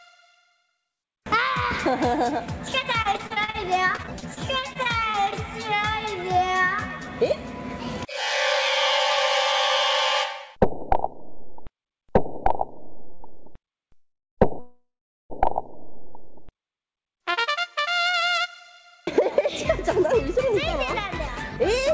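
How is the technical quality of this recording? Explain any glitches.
The recording has several network glitches, heard through a call path whose sound stops at 8 kHz, which fits a wideband codec such as G.722.

From 3.02 to 5.34 s there is repeated packet loss (robotic sound): fifteen short holes, the longest 41 ms, are patched by extending the previous sound. The result is choppy, with about 260 ms actually missing, unlike the stalls later.

From 4.57 to 6.39 s a jitter buffer slow-down repeats pitch periods to add 44 ms, so the sound drags to 98% speed without dropping in pitch.

Jitter buffer speed-up runs from 7.23 to 11.46 s at 102% and from 16.87 to 21.90 s at 103%. Short pitch periods are cut, around 70 ms and 150 ms in total, so the sound runs slightly faster but keeps its pitch.

At 13.14 s a short stall from a late packet holds the sound for 57 ms, with nothing lost.

From 13.95 to 14.39 s and from 14.59 to 15.32 s there are two call audio freezes, likely from packets delayed in transit. 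Each begins as the last sound fading out and then falls silent, for about 180 ms and then 370 ms. Playback resumes where it stopped, adding gaps of 428 ms and 704 ms without losing any audio.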